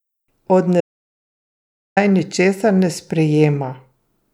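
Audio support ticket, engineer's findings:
Audio dropout to silence, 0.81–1.97 s, 1.16 s of speech lost before "naj ničesar ne". Silence with no room tone, unlike a gate; likely input link loss.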